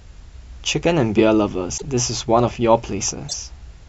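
Frames were likely cut from the MP3 stream, breaking the bit reservoir, so frames after each cut decoded with another frame's data. At 1.77–1.82 s and 3.28–3.34 s the speech jumps ahead and is disrupted for about two 26.1 ms frames.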